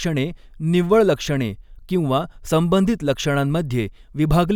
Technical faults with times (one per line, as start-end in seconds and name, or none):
none